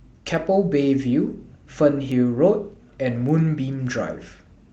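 Speech with word clock ticks: sharp, uneven clicks roughly every half second from 0.35 to 4.47 s, from an unlocked digital receiver slipping one sample per clock crossing.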